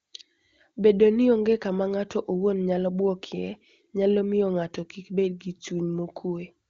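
No technical faults are audible.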